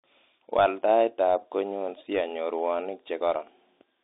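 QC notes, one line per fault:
throughout, Bluetooth CVSD headset codec: narrow, scratchy speech with granular hiss and gritty s sounds; one-bit up/down coding about 64 kbps, band roughly 150 Hz to 3.7 kHz.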